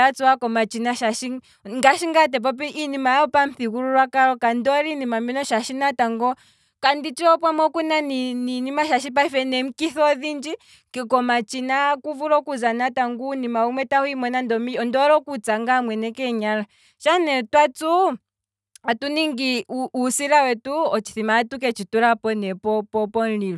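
No technical faults are audible.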